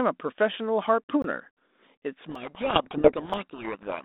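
At 1.22 s a block of digital silence about 20 ms long replaced the speech. The signal drops straight to silence and comes back with no fade, so the gap is heard as a short hole.

From 2.22 s to the end, a codec payload misread begins. The receiver unpacks the G.726 code words in the wrong bit order. Each frame still looks valid, but the ADPCM difference values it decodes are scrambled, so the speech, which until then carried only the light grain of the codec's telephone band of about 200 Hz to 3.7 kHz, is buried under harsh, rasping distortion. The fault persists because both ends never agree on the same packing again.

During that stretch, two more blocks of digital silence occur, at 2.35 s (about 2.3 ms) and 3.33 s (about 3.4 ms). Both are too brief to be heard as holes and come through as ticks or dips inside the distortion.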